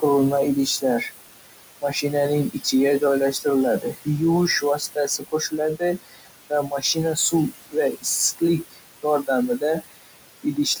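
Throughout this speech recording, the background sinks between phrases and swells back under the voice. These are noise suppressor artifacts: the suppressor pulls the room noise (sitting about 11 dB below the speech) down by about 20 dB, band by band and frame by frame. Parts of the speech itself also go faint or sound swallowed at 0.66–1.11 s, 1.66–2.04 s, 2.53–3.46 s, 3.80–4.21 s, 4.61–8.06 s and 8.37–10.8 s. This is speech cut by the noise suppressor, which mistakes quieter speech for noise and turns it down with the background by as much as about 22 dB. In most of these spans only brief slivers are affected, but the loss adds up to well over a second between 4.61 and 8.06 s.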